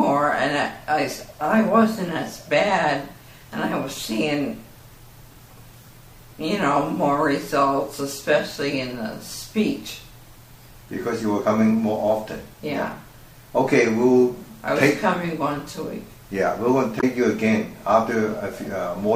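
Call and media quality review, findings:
Blip at 16.99–17.04 s: damaged data in a compressed stream, decoder misreads frames and resyncs at the next header. Spectrogram shows a brief broadband smear; waveform shows an abrupt discontinuity.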